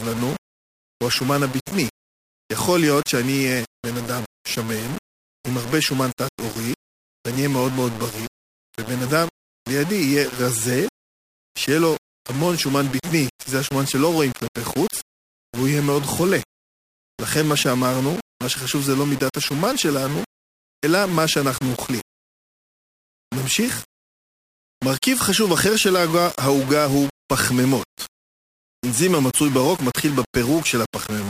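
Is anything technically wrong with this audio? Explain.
Yes. Throughout the speech there is a grainy, rasping distortion whose texture shifts with the signal itself, and quiet passages break up into a gritty sputter or drop out. This is most likely low bit depth without dither: the audio was rounded to very few levels, which fits a 4-bit quantiser. Because no dither decorrelates the error, it tracks the waveform, sitting only about 15 dB below the speech.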